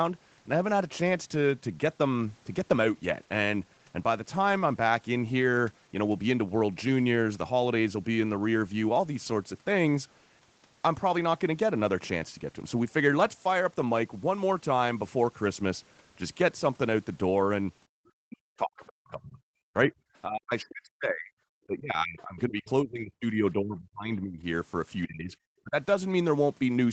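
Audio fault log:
17.88–18.00 s, background gated by the echo canceller: room sound drops by about 32 dB for about a tenth of a second as the canceller clamps the microphone during loudspeaker playback.
18.28–19.92, 20.25–21.36, 21.67–24.44, 25.06–25.36 and 25.63–25.76 s, speech suppressed in double talk: speech dips and breaks up by roughly 25 to 40 dB, likely because the canceller treated overlapping talk as echo.
22.18–22.22 s, other side's voice leaking through: a brief scrap of a second voice about 30 dB below the speech, likely residual loudspeaker echo the canceller left in the microphone signal.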